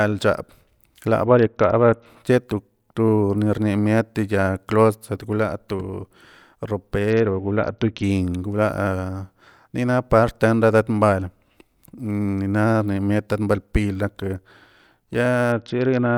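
Dull, gritty stretches at 1.25–2.06 s, 7.10–8.03 s and 15.52 s to the end mark a Bluetooth SBC bit pool drop, consistent with a fall from 28 to 7 (about 66 kbps) that starves the upper sub-bands.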